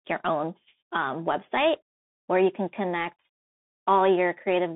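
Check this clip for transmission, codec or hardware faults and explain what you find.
One codec fault, running the whole clip: Bluetooth CVSD headset codec. Throughout, speech sits in a 150 Hz to 3.6 kHz band with nothing above 3.8 kHz. One-bit up-down steps, consistent with 64 kbps CVSD, leave scratchy s sounds and granular hiss.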